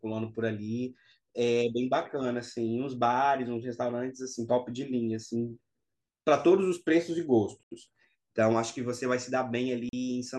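At 7.63 s the speech cuts to silence for 81 ms, then resumes where it stopped or slightly later. At 9.89 s it drops out again, for 40 ms. Both gaps are likely Bluetooth stalls: interference delayed packets, the headphone buffer ran empty, and playback paused until resent data arrived.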